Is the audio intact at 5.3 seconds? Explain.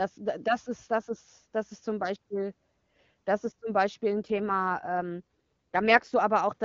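No. From 4.22 to 6.12 s an AMR rate drop makes the speech rougher and more synthetic. The network pushes the codec down to protect bits on a weak link, which fits 23.85 to 8.85 kbit/s. Unlike a dropout or a bandwidth switch, there is no gap and the band stays the same.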